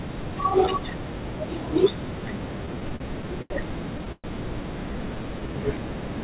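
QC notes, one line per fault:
2.66–3.52 s, repeated stalls (stutter): six short gaps, the longest 81 ms, about 163 ms filled in total; the jitter buffer kept draining, and the last sound was stretched each time, so delivery drags.
4.12–4.26 s, call audio freeze: about 118 ms of held, fading sound, ending in roughly 30 ms of silence before resuming where it stopped; likely late packets emptied the jitter buffer, raising delay by 118 ms.
4.92–5.54 s, jitter buffer slow-down: playback runs at 86% speed with 94 ms added through repeated pitch periods; pitch stays the same, but sounds are audibly drawn out.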